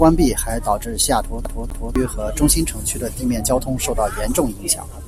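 From 1.45 to 1.96 s the speech sticks like a CD stuck on one turn. A 0.25 s loop repeats twice with a brief mute at each jump.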